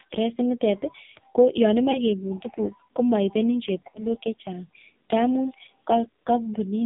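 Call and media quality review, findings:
AMR narrowband mobile codec, whole call. Heavy codec damage: speech sounds buzzy and synthetic, band limited to roughly 150 Hz to 3.7 kHz, nothing on top. The vocal-tract model is getting very few pulses per subframe to work with, which fits a low AMR-NB mode around 5.9 kbps. Probably a narrowband leg or a low-rate mode pinned on the radio side. Worth checking the codec negotiation.

Lost AMR speech frames, two spots. At 1.92–1.99 s there's a short dip and warble, consistent with one lost frame of about 20 ms. At 3.90–4.04 s it's longer: the sound smears and sags, then comes back a bit rough, which suggests two consecutive frames, about 40 ms. The decoder is concealing by reusing the last good pitch and spectral settings with falling gain. Root cause sits on the radio link, where frames are failing their checksum.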